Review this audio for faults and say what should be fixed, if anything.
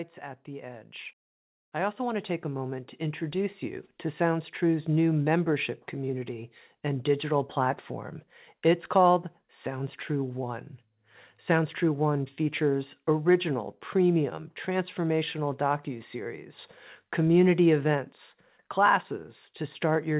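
From 0.2 to 3.95 s the speech and background swell together by about 11 dB: automatic gain rising, as the gain control judged the input too quiet and slowly raised its level. The call path's narrowband sound, with nothing above 4 kHz, fits G.711. To prevent the swell, set a suitable fixed input level or give the gain control a sensible starting gain so it doesn't ramp up at the start of a call.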